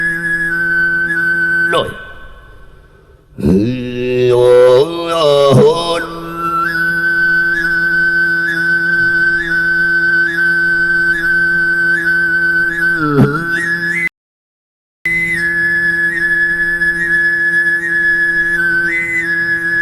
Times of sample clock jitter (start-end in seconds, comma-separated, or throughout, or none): none